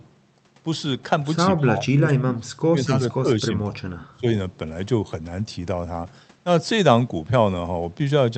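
From 1.51–2.42 s, 2.72–3.27 s and 3.47–4.27 s, the speech drops by up to about 25 dB. The waveform thins and the spectrogram bands fade. This is likely speech suppressed in double talk, with the echo canceller turning down its own talker.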